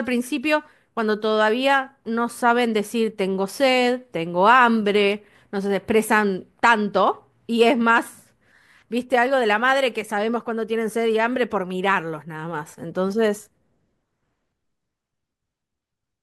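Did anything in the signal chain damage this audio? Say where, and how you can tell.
No, nothing along the chain seems to have left a mark on this speech recording, and there's no stage I'd point a finger at.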